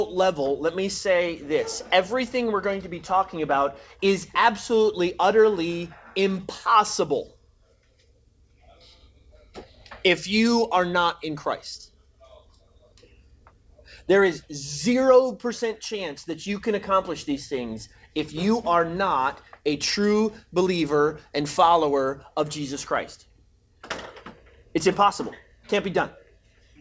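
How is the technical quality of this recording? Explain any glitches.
No glitches turn up anywhere here; the audio has the feel of a wideband call line, which fits G.722 at around 64 kbps, so nothing reaches above 8 kHz, but that's simply how such a line carries sound rather than anything going wrong.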